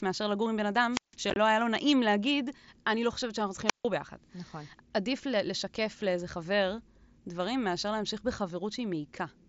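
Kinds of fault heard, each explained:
Wireless microphone squelch dropout: the radio link fades and the receiver's squelch shuts the audio, leaving near-silent holes of about 160 ms near 0.9 s and 150 ms near 3.7 s.
Unconcealed Bluetooth headset packet loss: lost headset packets leave abrupt gaps, here a burst near 1.3 s totalling 37.5 ms over 60 ms, the longest run 22.5 ms.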